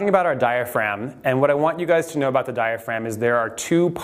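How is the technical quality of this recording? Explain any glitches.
The recording has one recurring glitch: faint ticks from about 0.17 s to 3.32 s. These are clock slip clicks. There are about four of them, roughly one per second. The likely cause is two devices running on separate, unsynchronised clocks. A drift of around 20 parts per million builds up to a full sample about once a second. A single sample is then dropped or repeated. Each slip leaves a tiny discontinuity, which is heard as a small regular tick.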